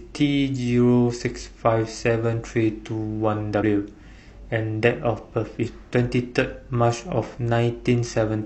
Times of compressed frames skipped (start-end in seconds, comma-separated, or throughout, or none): 1.16-1.21, 3.58-3.63, 5.62-5.68